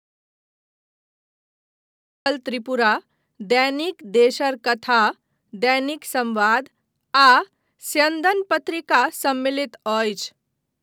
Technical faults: audio dropout to silence

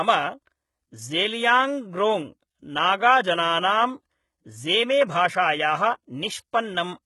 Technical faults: HE-AAC compression

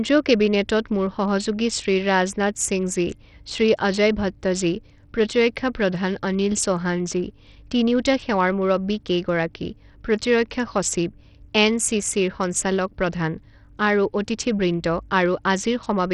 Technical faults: Bluetooth SBC compression

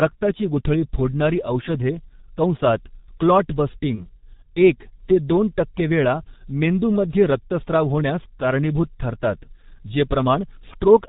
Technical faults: G.723.1 codec; VoIP packet loss concealed by the speech codec

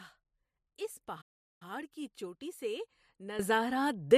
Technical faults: playback stall; sudden gain jump

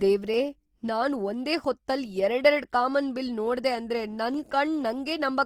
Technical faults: Opus compression; dropped samples

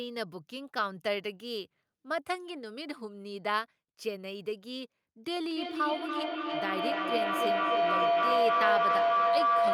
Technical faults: feedback howl

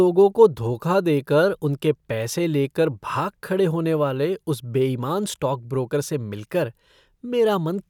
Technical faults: none

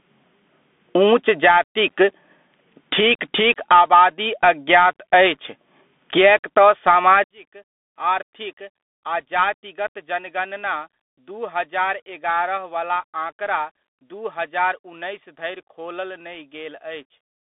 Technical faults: gain pumping; Bluetooth CVSD headset codec; one channel inverted

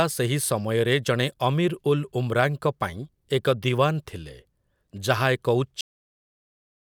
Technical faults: cut-off end

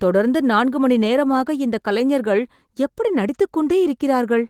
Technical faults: none

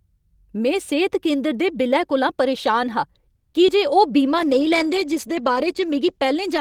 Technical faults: call audio freeze; short concealed packet loss; call bitrate drop

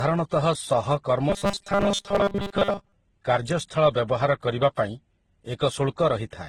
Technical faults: transcoding between lossy codecs; robotic sound from repeated short buffers

